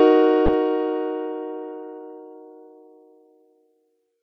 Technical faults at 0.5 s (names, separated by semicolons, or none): damaged data in a compressed stream